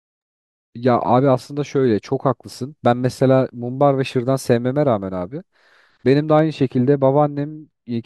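From about 6.39 s to the end at 8.05 s, the speech goes dull and muffled: de-emphasis applied wrongly. A treble-cut filter ran on audio that didn't need it, tilting the top end down smoothly to about 11 dB lower at 10 kHz than at 1 kHz.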